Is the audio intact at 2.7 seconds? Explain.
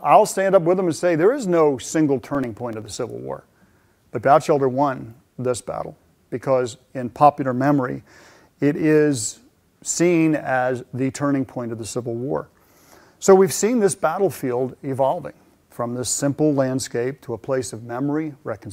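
No. From 2.29 to 2.99 s there is processor overload crackle: the processor misses around ten deadlines for very short buffers, a few milliseconds each, leaving hard-edged silent gaps heard as gritty tearing. A waveform shows tiny dropouts; a spectrogram shows thin vertical broadband lines.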